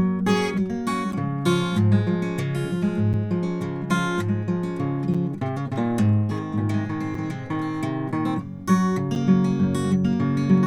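This music clip has a gap between chunks: a hard-edged hole of about 7 ms at 1.12, 3.13, 5.14, 7.15 and 9.15 s, repeating every 2.0 s. The audio arrived in 2-second pieces, and a short stretch of silence was inserted at each join, from codec padding or late playback start. Unlike a dropout, no music is lost. The music simply pauses and resumes where it left off, and the strict regular spacing gives it away.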